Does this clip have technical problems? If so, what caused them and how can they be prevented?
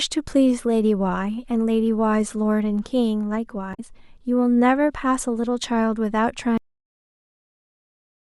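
Yes. Between 3.71 and 3.80 s there is a short glitch caused by damaged data in the compressed stream. Corrupted bytes made the decoder misread frames and lose sync until it found the next valid header. On a spectrogram this appears as a brief disruption that breaks the speech harmonics. Checksummed transport and error detection with retransmission would prevent it.

The speech then stops abruptly at 6.58 s, a cut-off end where the final buffers were never written or played. The waveform drops straight to a flat line of digital silence with no decay, and the spectrogram goes empty across all frequencies at once. Flushing and draining all buffers before closing the file or device prevents this.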